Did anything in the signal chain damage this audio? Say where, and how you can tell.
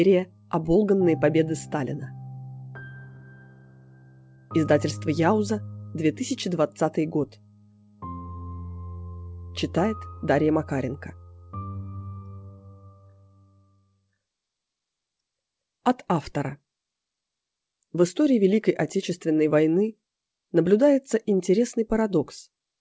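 Yes. The damage sits at the network and jitter-buffer stage, and the cause is clock drift between sender and receiver. The sender's clock runs slow, by roughly 2 percent. Its packets arrive a little late on average, so the receiver's buffer keeps draining. The receiver has to stretch the audio to keep pace. The sound stays band-limited to 8 kHz throughout, which fits a G.722 call path working as expected.

The stretching shows up as repeated timing corrections. They run from 0.20 s to 22.60 s, nearly the whole clip. The receiver repeats short slices to fill the gap, which amounts to playback at about 98 percent speed. Around half a second of extra material is added overall. Each edit is tiny and goes the same way. The edits are unevenly spaced.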